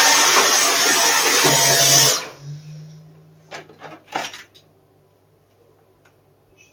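Right from the start there's a noise suppressor applied to music or sounds. A speech-tuned suppressor is treating the steady parts and tails as noise, so the level keeps pumping, with swings of around 10 dB as held sound sinks and attacks poke through.

On top of that, you get stretches of sound cut by the noise suppressor at 2.19–2.44 s, 2.6–3.82 s and from 4.45 s to the end. There the sustained material dips by up to about 7 dB and its decay gets clipped short.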